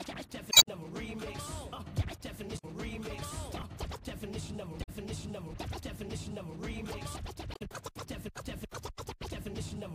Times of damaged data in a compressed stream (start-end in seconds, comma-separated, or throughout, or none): 0.48-0.68, 2.55-2.64, 4.79-4.89, 7.51-7.61